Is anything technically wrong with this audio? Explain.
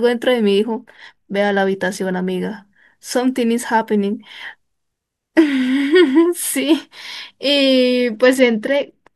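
Yes, there's a Bluetooth SBC bit pool drop from 0.69 to 2.26 s in this speech. The link evidently got congested and the encoder starved its bits, which fits the bit pool falling from 28 to 11, around 90 kbps. Top sub-bands lose their bits and the rest get coarsely quantised, so the treble goes dull and gritty until the rate recovers.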